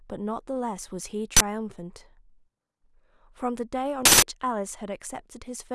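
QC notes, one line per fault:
1.37–1.41 s, 4.05–4.22 s: uninitialised buffer. Blocks played before being filled output leftover memory as loud digital-noise bursts; lengths fit 1024- and 4096-sample blocks.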